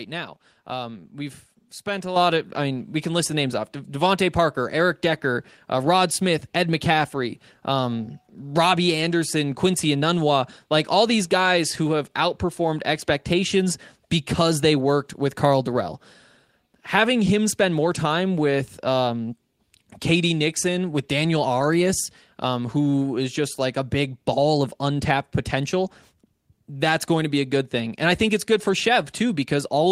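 This is a speech clip with one fault, a microphone volume stepped up. At 2.16 s, between "we've spent a" and "of I mean we", the voice and background jump together by about 7 dB. Call software judged the microphone too quiet and raised its input gain in one step.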